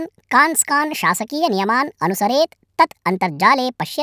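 Throughout, the audio plays back at a wrong sample rate, faster than it was captured, with no conversion. The rate mismatch fits 22 kHz material clocked out at 32 kHz, so the speech runs about 1.45 times too fast and sits roughly 6.5 semitones high, sounding hurried and chipmunk-like.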